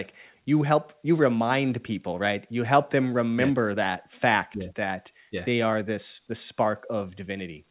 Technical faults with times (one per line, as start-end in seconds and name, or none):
none